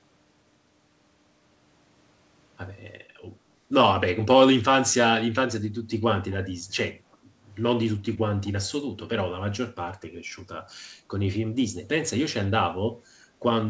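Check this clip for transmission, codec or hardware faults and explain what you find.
Two faults occur close together in this speech clip.

Echo leak, 7.12 to 7.16 s: a brief, very faint delayed copy of the speech, about 0.37 s behind and roughly 40 dB down. The likely cause is a far-end loudspeaker whose echo canceller left a scrap of its microphone pickup in the return signal.

Background gated by the echo canceller, 7.23 to 7.43 s: the room sound dips by about 7 dB for about a fifth of a second, then recovers. While the loudspeaker played, the canceller pulled the microphone level down, briefly pumping the background.

The call path has no content above 8 kHz, which fits a 64 kbps G.722 stream.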